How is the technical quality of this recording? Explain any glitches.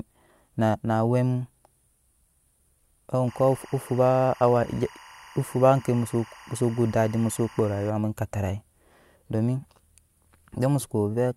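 The recording has one fault, a stretch of timecode bleed.

From 3.28 s to 7.90 s, timecode bleed: linear timecode leaking from an adjacent track or cable adds a square wave flipping between tones near 1 and 2 kHz, pacing consistent with 24-frame code. It sits about 25 dB below the speech as a steady chirping warble.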